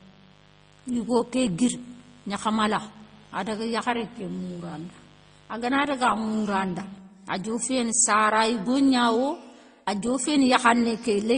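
All the way through, the speech carries smeary, swirly artefacts from two different codecs layered together, with nothing above about 9.7 kHz. That's likely transcoding between lossy codecs, probably a low-bitrate MP3 re-encoded to Opus. From the start until 6.98 s there's also a steady, raspy 50 Hz mains buzz, sitting roughly 30 dB under the speech. Sharp switching spikes get in, probably through a dimmer, rectifier or a missing shield, and it stops just before "adioféné sara yigognawo".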